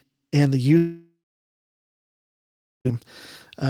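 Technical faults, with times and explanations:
0.77–2.87 s, long network dropout: right after "and the", the sound smears into a buzzy tail that fades over roughly a third of a second, then about 1.7 s of near-silence. Audio returns at 2.87 s, but roughly 2.1 s of sound is missing, likely because packets stopped arriving and the receiver concealed the gap.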